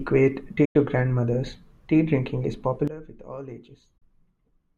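At 0.65 s the digital broadcast receiver stopped getting valid frames, either from lost signal or failed checksums, and muted itself. The speech fades out over a few milliseconds and leaves a hole of roughly 96 ms, which fits about three lost frames, before sound returns at 0.76 s. Whatever was transmitted during that gap is gone rather than blurred.

At 2.88 s the level drops abruptly by about 17 dB and stays down until the end of the clip. Because the speech and the background noise fall together at the same instant, with no ramp, the likely cause is a sudden gain jump: a digital gain change applied from one sample to the next, perhaps a setting change or bit shift. It is heard as a step-down in loudness.

Within that quieter stretch a second digital broadcast dropout hits at 3.98 s. The same quick fade to silence leaves a gap of about 32 ms, which suggests a single lost frame, and the sound comes back at 4.02 s.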